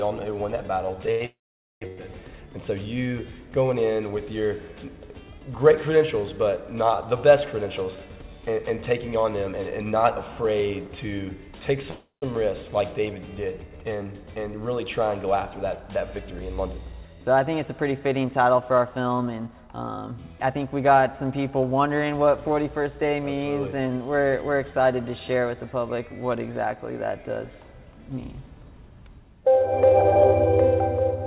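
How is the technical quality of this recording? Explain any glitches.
The recording has clear timing glitches from a network call. Little is lost, but the flow is interrupted six times. The sound stops at 4 kHz, which fits a narrowband G.711 call codec.

Repeated stalls (stutter) run from 1.06 to 1.99 s. There are three gaps, the longest 96 ms, about 193 ms in all. Packets arrived late, so the jitter buffer emptied. The receiver stretched the last sound each time. The audio hitches and drags.

A call audio freeze falls at 1.26 to 1.83 s, lasting 555 ms. Most of it, 470 ms, is silent. Another comes at 11.91 to 12.24 s, lasting 314 ms, with 140 ms of silence. Held-up packets likely emptied the buffer. The sound trails off, then resumes where it stopped.

Jitter buffer speed-up runs from 7.66 to 10.88 s at 107% speed. It recurs from 16.30 to 20.54 s at 106%. The buffer had grown too full. 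The receiver cut tiny pitch-period slices, dropping around a fifth, then a third, of a second. The pitch stays put, but the sound feels hurried.

Jitter buffer slow-down occurs at 13.70 to 14.05 s. The buffer ran low, so the receiver repeated pitch periods, adding 46 ms. Playback drops to 88% speed. Sounds there are drawn out at unchanged pitch.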